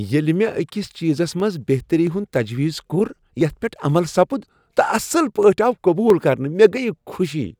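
Clock drift buffer slips run from 0.73 s to 7.45 s: a click recurs about every 0.67 s, roughly ten times. This is likely two devices on mismatched clocks, off by around 500 ppm, so the buffer periodically drops or repeats a short block of samples in the speech.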